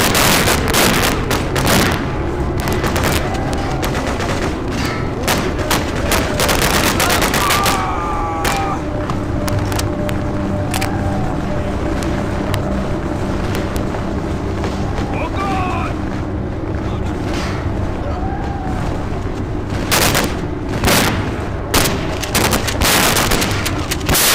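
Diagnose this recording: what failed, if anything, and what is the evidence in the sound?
Integer overflow in the fixed-point gain or sample-format stage: throughout, loud peaks pushed about 10 dB too hot wrap to the opposite sign, giving harsh cracks on a small fraction of samples.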